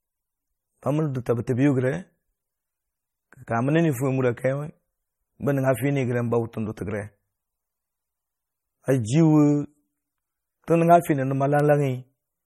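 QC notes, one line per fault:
throughout: MP3 compression. The speech sounds watery and swirly, with metallic chirps on s sounds, and nothing above 15.3 kHz. Likely an MP3 encoder short of bits, fitting roughly 32 kbps, cutting the treble and zeroing weak frequency lines that flicker between frames.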